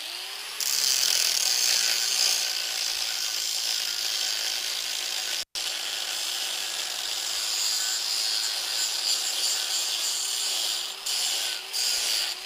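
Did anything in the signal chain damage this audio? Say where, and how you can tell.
Yes, it's in the analogue wiring: an intermittent contact at 5.40 to 5.55 s, where a loose connection opens for about 122 ms, with crackle either side and faint hiss.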